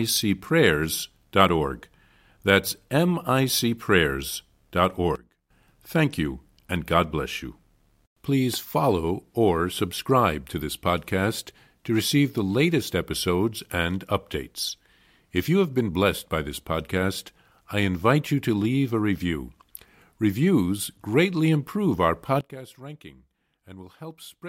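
A sudden gain jump hits at 5.16 s, where the speech and its background noise both fall by about 16 dB at once and come back up at 5.50 s. The same drop returns at 22.41 s, right after "greatly improve our", and lasts to the end. Because level and noise floor step together with no fade, the likely cause is a digital gain setting applied from one sample to the next without a ramp.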